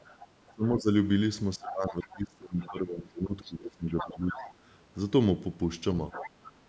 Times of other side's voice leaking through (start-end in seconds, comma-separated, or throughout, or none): 0.22-0.52, 1.69-2.72, 3.44-4.54, 6.12-6.50